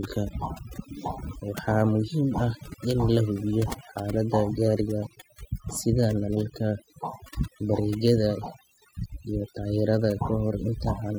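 A speech recording suffers from overdone noise removal for its whole length. The noise reduction was pushed too hard, so individual frequency bands near its noise estimate get driven down or out, taking quiet parts of the voice with them. Between phrases the background sits at near silence sprinkled with twinkling specks. A simple noise gate would instead cut the whole signal at once, leaving clean silence rather than scattered specks.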